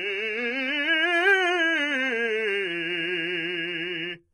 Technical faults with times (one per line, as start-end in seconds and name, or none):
0.00-4.33 HE-AAC compression